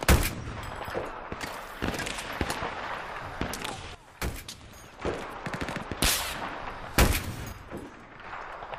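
At 3.95 s the level drops abruptly by about 12 dB until 5.02 s, then again by about 6 dB from 7.52 to 8.24 s. These are sudden gain jumps, likely from unramped digital gain changes. Sound and background noise fall together.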